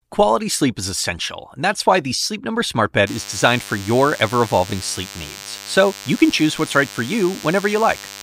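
DECT cordless phone buzz enters at 3.07 s and runs to the end of the speech. A nearby DECT handset or base emits a radio burst every 10 ms, which the audio circuitry rectifies into a thin, steady 100 Hz buzz rich in harmonics, roughly 15 dB below the speech.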